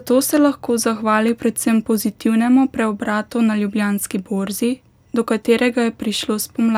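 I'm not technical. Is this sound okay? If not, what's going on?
Yes, this speech sounds fine, with nothing here that points to a technical problem.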